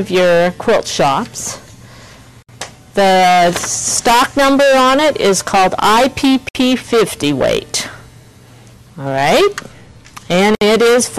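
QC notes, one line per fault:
Throughout: hard clipping. Some gain stage drives the signal about 22 dB past what the converter or number format can hold, so roughly a fifth of all samples are cut flat. The squared-off peaks add high harmonics, heard as harsh fuzz on every loud moment.
2.42–2.49 s, 6.49–6.55 s, 10.55–10.61 s: gap at a join of encoded pieces. Separately encoded segments were spliced without trimming encoder delay and end padding, leaving a gap of about 62–64 ms every 4 s. Sound cuts out abruptly, smeared at the edges, then resumes where it stopped.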